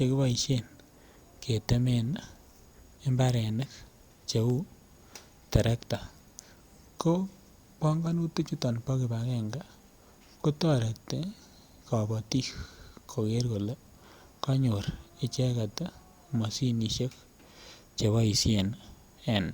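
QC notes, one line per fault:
Nothing stood out on listening to this speech recording.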